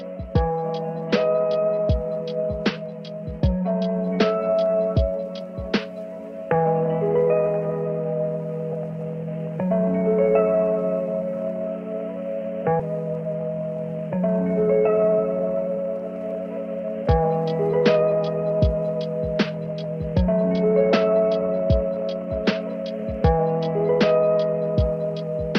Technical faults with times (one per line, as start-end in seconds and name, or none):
12.79 skip ahead
13.98-15.78 jitter buffer speed-up